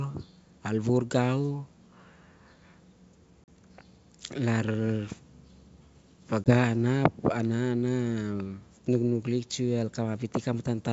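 Packet loss on an ADPCM call leaves silent holes at 3.44 s (40 ms) and 6.44 s (20 ms). Speech resumes slightly distorted while the decoder's predictor realigns.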